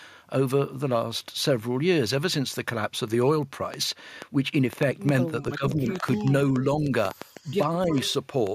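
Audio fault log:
3.74 to 8.48 s, train of clicks: Something, likely interference from nearby equipment or a struggling interface, injects a pulse roughly 4.65 times per second at an uneven pace. About twenty similar clicks tick over the speech and pauses, peaking around 10 dB above it.
5.42 to 6.29 s, 6.75 to 6.91 s, 7.85 to 7.98 s, speech suppressed in double talk: The echo canceller, likely unable to separate the local talker from loudspeaker echo while both sides spoke, turns everything down. The speech dips, by about 10 dB in the first stretch and about 5 dB later.
5.90 to 5.94 s, 7.32 to 7.57 s, 8.02 to 8.13 s, echo leak: The far end's echo canceller likely fails to remove all the loudspeaker sound its microphone picks up, so some is sent back. A faint copy of the speech, delayed by 309 ms and about 20 to 30 dB down, trails in scraps.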